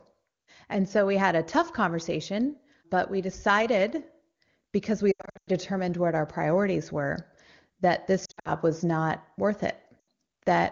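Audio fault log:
5.11–5.49 s, 8.25–8.50 s, 10.00–10.04 s, lost AMR speech frames: scattered dropouts totalling 280, 160 and 80 ms (longest run 100 ms), before "what our priorities were", between "priorities were that this" and "was not worth", and after "was not worth". Unlike a clean cut, the wideband decoder repeats the last good frame with falling gain, so each gap sinks to near silence within two frames, and speech returns briefly weak or rough.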